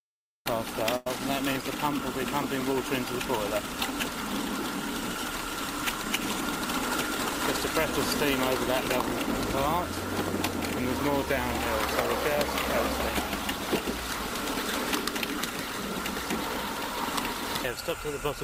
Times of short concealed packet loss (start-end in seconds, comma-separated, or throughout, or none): 14.54